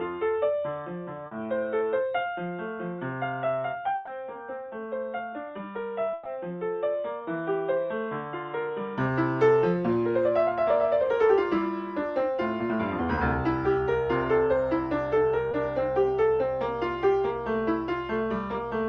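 From the start to 8.98 s the sound is dull and boxy, with nothing above 3.8 kHz. It sits a few decibels quieter and carries a faint new noise floor. This is likely an input switched to a poorer device. At 8.98 s the sound clears again with no gap, opening up to the call path's wider band.

At 1.27 s a short concealed packet loss leaves a 40 ms hole. The receiver bridges it by extending the preceding sound. The result is a brief smear. Two more follow at 13.15 s and 15.51 s, each filling 20 ms with a quick wobble.

A burst of packet loss hits at 3.95 to 4.09 s, and another at 6.13 to 6.27 s. Each drops 120 ms of audio. The receiver stretches the last sound and lets it decay, giving a held buzz or fading hiss. The sound then resumes with that stretch gone.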